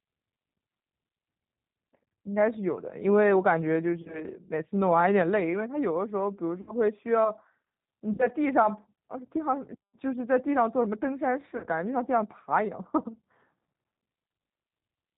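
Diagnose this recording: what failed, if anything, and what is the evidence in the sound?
Codec stage: the speech runs through G.729 the whole way, with nothing above 4 kHz and a plainly rough, synthetic edge from its pulse-based 8 kbit/s rebuild.

Network stage: VoIP packet loss concealed by the speech codec at 4.02–4.26, 6.61–6.74, 8.13–8.29 and 11.57–11.66 s. The decoder stretches a fading buzzy tone or coloured noise over 30–60 ms gaps, then recovers slowly.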